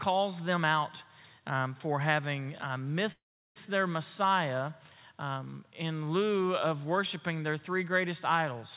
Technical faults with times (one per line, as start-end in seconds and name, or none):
3.12-3.58 call audio freeze